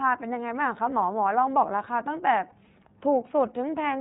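A speech recording carried through the iLBC codec, whose narrowband coding cuts everything above 4 kHz, so a spectrogram shows an empty band over that line. Each frame is coded on its own, leaving the voice plainly rough and slightly synthetic, which fits iLBC's 30 ms mode at about 13.3 kbps. Lost iLBC frames appear from 2.48 to 2.53 s, where roughly 30 ms of signal, consistent with one missing frame, is replaced by a repeated pitch cycle mixed with noise. It sounds like a brief buzzy, held vowel and looks like a short run of repeated periodic waveform cycles with smeared harmonics on the spectrogram. Because iLBC frames stand alone, the voice recovers immediately afterwards.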